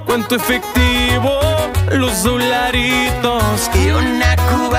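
No technical faults can be heard anywhere in the audio, and the signal stays steady and intact throughout.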